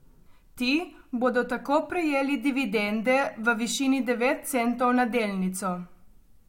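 No technical faults can be heard anywhere in the speech recording.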